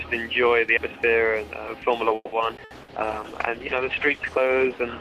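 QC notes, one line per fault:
0.77 s and 2.57 s, audio missing between chunks: at each point the sound skips abruptly, with about a tenth of a second gone and the two sides butted together without silence. The likely cause is a recorder or processor dropping audio while switching between chunks.
2.15–2.91 s, repeated packet loss (robotic sound): four holes in quick succession, the longest 170 ms, with 180 ms lost outright and 350 ms patched by stretching the preceding sound. Concealment covers about 41% of this span, giving a choppy, mechanical, robotic texture.
2.75–5.00 s, call bitrate drop: the encoder falls from 48 to 13 kbps and holds the lowest rate to the end. Coarser coding and a reduced high-frequency band make the sound rougher, watery and muffled, overlapping the tail of the packet-loss stretch.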